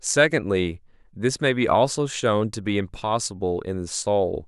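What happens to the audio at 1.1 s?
At 1.1 s the speech sits inside a run of clock slip clicks lasting from 0.59 to 3.95 s. These are faint, regular ticks about once a second, roughly four in all, each consistent with a single sample being dropped or repeated. The likely cause is two devices running on free clocks that differ by roughly 20 parts per million, so a whole sample of drift builds up about every second.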